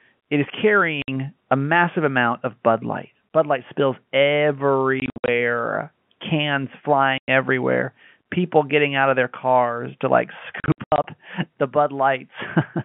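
Speech on a telephone-band line, limited to roughly 150 Hz to 3.4 kHz as G.711 coding gives, is cut by abrupt silent holes with hard edges at 1.02–1.08 s, 7.18–7.28 s, and as scattered bursts across 5.0–5.28 s and 10.6–11.04 s. This is packet loss filled with silence. Audio packets never arrived and the receiver played silence instead. The gaps come in 20 ms steps, which fits 20 ms packets.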